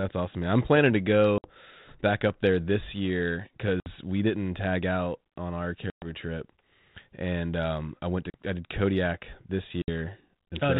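Packet loss on an ADPCM call hits at 1.38 s (after "man I'm planning to"), 3.8 s (after "up there this year"), 5.9 s, 8.3 s (after "um I went to") and 9.82 s. Each hole of 40 to 120 ms drops to silence, and the decoder's adaptive predictor and step size lose step with the sender. The sound then returns with brief, slight distortion before settling.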